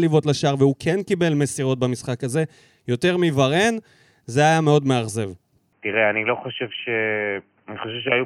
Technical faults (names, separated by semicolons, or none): input switched to a poorer device